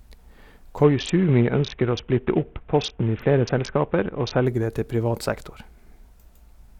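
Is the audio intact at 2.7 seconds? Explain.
No. From 0.83 to 4.46 s, which covers 2.7 seconds, the clip has a Bluetooth SBC bit pool drop. A congested wireless link forced the encoder to spend far fewer bits per frame. The sound points to a bit pool falling from around 28 to about 5, near 54 kbps. Starved of bits, the upper sub-bands go largely empty and the remaining bands are coarsely quantised, so the speech turns dull and muffled with a gritty grain until the rate recovers.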